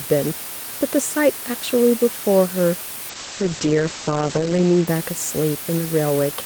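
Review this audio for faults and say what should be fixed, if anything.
A steady, even hiss runs through the whole speech clip with no distortion, close to the level of the voice. This is low bit depth with dither, and the noise level fits a 4-bit signal. Prevent it by keeping at least 16 bits until the final export.

From 3.1 to 4.93 s the speech turns rough and muffled, with the top end cut from 20 kHz to 8 kHz. This is a call bitrate drop that fits a fall from 32 to 9 kbps, lasting about 1.5 s at its lowest. Prevent it by providing enough network headroom or setting a higher minimum encoder bitrate.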